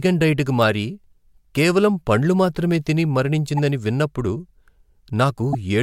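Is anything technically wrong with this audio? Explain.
Yes. Two short glitches break through the speech: one from 3.57 to 3.59 s, just after "కేవలం పండ్లు మాత్రమే తిని", and a louder one from 5.53 to 5.55 s. These are corrupt frames decoded: flipped bits in the compressed data made the decoder put energy at the wrong frequencies. The first fits about one damaged frame, the second a few.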